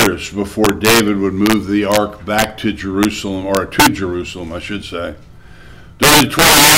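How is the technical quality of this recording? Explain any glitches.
The recording has integer overflow throughout: violent cracks at 0.00–0.06, 0.65–1.00, 1.46–1.54, 1.92–1.97, 2.39–2.44, 3.03, 3.55–3.87 and 6.03 s to the end. Loud peaks went about 1 to 12 dB past the integer limit and wrapped to the opposite sign, far harsher than clipping.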